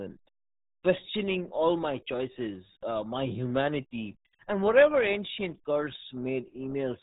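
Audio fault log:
throughout, RealAudio 14.4 codec: the speech passed through a very low-rate dial-up speech coder, consistent with roughly 8 kbit/s, which discards everything above 3.8 kHz and rebuilds the rest coarsely. The result is heavily muffled, gargly speech with a dull, closed-in top end.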